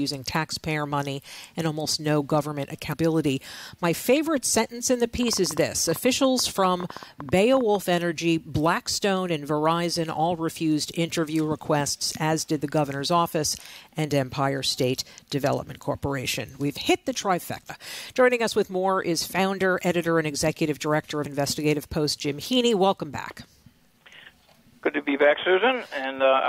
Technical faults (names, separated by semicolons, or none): damaged data in a compressed stream; train of clicks